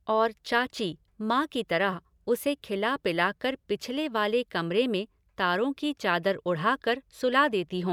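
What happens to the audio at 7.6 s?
Nothing goes wrong at 7.6 s; the speech there plays through intact, with no dropout, click or distortion.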